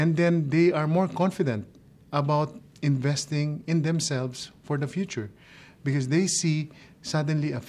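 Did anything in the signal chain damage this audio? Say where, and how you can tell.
No, nothing along the chain left an audible mark on this audio that I can point to at any stage.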